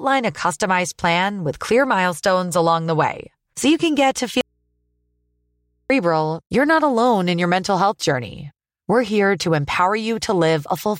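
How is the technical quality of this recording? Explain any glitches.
The recording has one clear glitch. From 4.41 to 5.90 s, an audio dropout to a faint residue occurs. The speech cuts out abruptly for about 1.5 s. Only a low mains hum remains, roughly 50 dB below the speech. The likely cause is a broken connection ahead of a still-live input, which picks up hum when left open.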